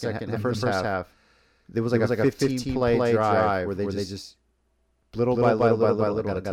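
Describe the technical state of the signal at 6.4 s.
At 6.4 s the speech carries a doubled audio track, present across the whole clip: a second full-band copy at roughly equal loudness trails the original by about a fifth of a second, with no decay or room colouring, likely from a slower parallel capture path. It sounds like a dry, stuttering echo of every syllable. On a spectrogram each syllable's pattern repeats intact about 200 ms later; the waveform shows overlapping, equally tall envelopes offset by that gap.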